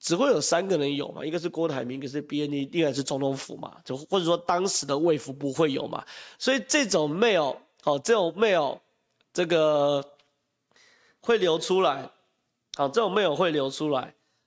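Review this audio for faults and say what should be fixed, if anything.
No faults can be heard; nothing needs fixing.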